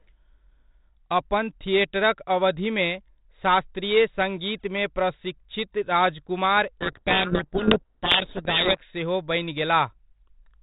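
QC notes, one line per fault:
6.81–8.79 s, codec payload misread: for about 2 s the speech is buried in harsh, gritty distortion, then clears. The bit order of the G.726 code words no longer matches between the two ends, so each code word is decoded with its bits swapped into the wrong positions. Most samples' predicted differences are then wrong, and the adaptive predictor drifts. Outside this span the 32 kbit/s G.726 path shows only light coding noise and the expected 4 kHz band limit.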